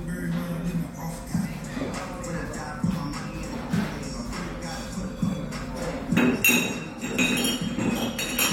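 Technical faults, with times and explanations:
Listening closely to this recording of sounds, nothing stood out as a technical problem at any point.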